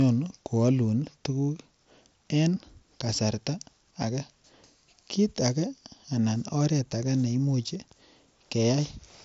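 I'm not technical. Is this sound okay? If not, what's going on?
Yes, no faults found: it's speech over a Bluetooth headset link using the mSBC codec, which carries nothing above about 7.7 kHz, as expected for that path.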